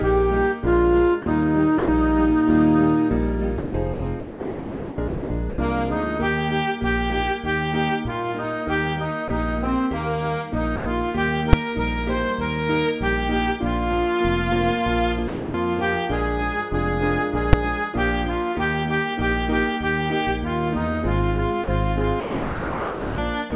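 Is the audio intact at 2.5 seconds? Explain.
Yes, the audio is intact at 2.5 seconds, with nothing but the narrowband character of the call path, which carries no content above 4 kHz.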